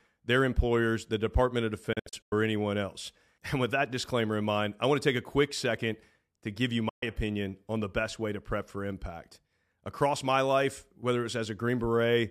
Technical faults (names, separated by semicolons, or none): digital broadcast dropout